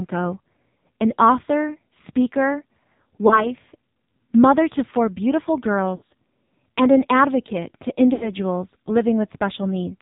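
The whole recording passes through the AMR narrowband mobile codec: nothing above 4 kHz survives, and heavy buzzy, synthetic coloration points to a low mode around 5.9 kbps.

Lost AMR speech frames occur at 3.28 to 3.49 s, at 5.96 to 6.02 s after "mother to four beautiful", and at 8.14 to 8.32 s after "and an advocate to". Each time, the decoder repeats the last good pitch and vocal-tract settings at falling gain. The first dip fits one missing 20 ms frame. The later ones fit losses of about 60 ms and 80 ms, where the sound is drawn out and fades, and the speech returns weak for a moment.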